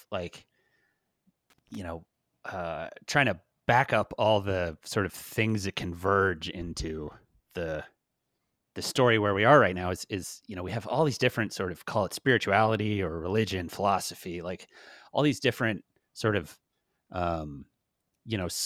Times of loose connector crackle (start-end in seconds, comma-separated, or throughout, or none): 1.50-1.77